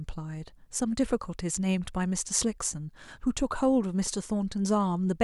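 No technical faults can be heard anywhere in the recording.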